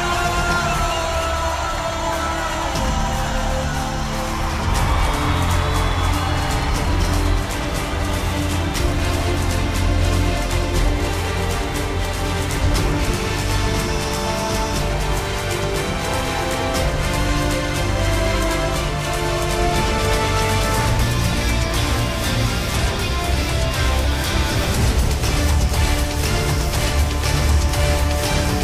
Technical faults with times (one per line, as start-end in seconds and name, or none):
none